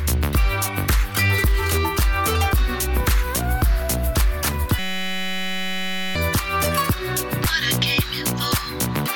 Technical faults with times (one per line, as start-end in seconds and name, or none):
4.79-6.15 system hang loop